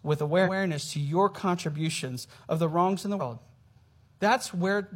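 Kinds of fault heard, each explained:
Damaged data in a compressed stream: a stretch of the coded speech stream was corrupted, so the decoder misread those frames, lost sync and searched for the next frame header. This leaves short glitches at 0.42–0.49 s, just before "to your contributions", and at 3.16–3.22 s.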